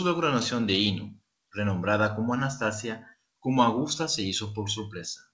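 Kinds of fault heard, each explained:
Kinds of fault heard: none; the speech has come through a call path that carries nothing above 8 kHz.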